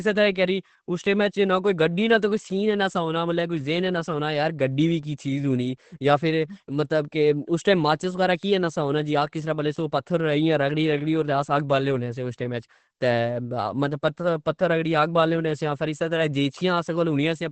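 Throughout the clip, the speech was likely squeezed through Opus compression at a very low rate, with the encoder falling back to its speech-oriented SILK mode, which fits a bitrate of roughly 12 kbps. Working at wideband limits, it discards everything above about 8.5 kHz, so the top end simply stops there. The damage is heavy: consonants lose their crispness and the voice sounds muffled and hoarse.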